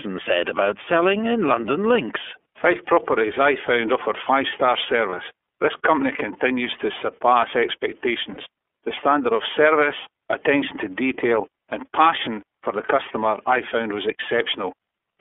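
From start to end the speech carries the iLBC codec: a narrowband line confined to roughly 300 Hz to 3.4 kHz, with plainly audible rough, slightly synthetic texture. Each 30 ms frame is coded independently, which fits iLBC's 13.33 kbps mode.

At 5.09 to 5.14 s and again at 8.33 to 8.38 s come lost iLBC frames. The decoder bridged each gap, consistent with one missing 30 ms frame, by repeating the last pitch cycle with added noise, giving a brief buzzy held vowel before clean decoding resumes immediately.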